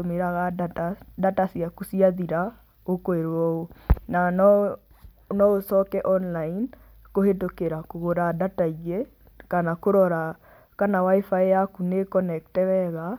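Nothing goes wrong anywhere in this stretch of speech, so there's no technical fault to point to.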